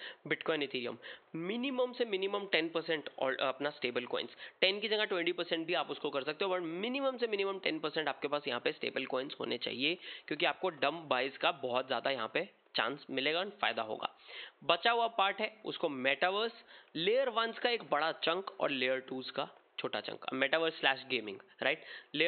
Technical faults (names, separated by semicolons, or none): none